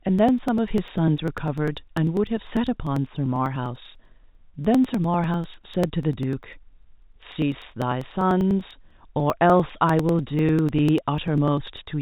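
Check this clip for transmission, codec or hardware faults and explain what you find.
One fault runs through the speech: periodic USB or driver dropouts from 0.09 s to 11.87 s, repeating every 0.099 s, roughly ten times a second and around a hundred times in all. Each time something briefly stalls the audio driver or USB transfer, roughly a millisecond of samples is skipped outright, so the waveform jumps and a small tick sounds, but only under the speech. The strict clockwork spacing separates it from network packet loss, whose gaps fall irregularly and last longer. The telephone-band coding, cutting everything above 3.8 kHz, adds no audible damage of its own.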